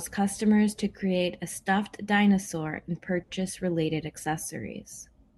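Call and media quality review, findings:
Short stall from a late packet, 3.23 to 3.30 s: one sound held 50 ms too long, slight buzz or dip, then speech resumes where it stopped. Jitter buffer ran dry; receiver stretched audio while waiting. Unlike loss concealment, nothing skipped; playout simply continues 50 ms later.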